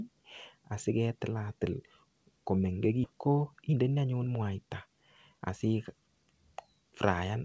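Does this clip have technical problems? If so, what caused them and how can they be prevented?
Yes. There is a skip ahead from 3.04 to 3.06 s. About 0.7 s of speech is missing, and playback jumps straight across with no fill. The delayed audio was dropped so playback could catch up. A larger jitter buffer or better network timing would prevent this.

A jitter buffer speed-up follows from 3.13 to 5.41 s. The receiver trimmed tiny pitch-period slices again and again, removing roughly 0.3 s. Speech runs at 115% speed with unchanged pitch and sounds hurried. Steadier packet delivery and gentler buffer adaptation would prevent it.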